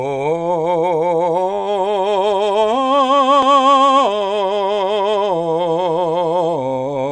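Listening through this music clip, nothing stood out as a technical problem.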